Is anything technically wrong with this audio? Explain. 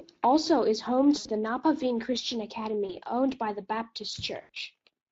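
Yes. The speech runs through the Speex codec for its whole length, at a setting that points to roughly 20 kbps. With so few bits for the excitation, the voice comes out noisy and hoarse. On a spectrogram the harmonics look smeared, and the band above 8 kHz is a diffuse, noise-like wash with little structure.

There are three dropouts with VoIP packet loss concealed by the speech codec: 1.17 to 1.29 s, just after "also is home"; 2.85 to 2.97 s, just before "owned by the"; and 4.41 to 4.49 s. Each gap is about 40 to 80 ms long. The decoder extends its last pitch and filter while lowering the gain, so each gap is a buzzy tone or coloured noise that fades. A spectrogram shows a frozen, smeared spectrum across each gap, and the waveform's envelope tapers away before the voice comes back weak.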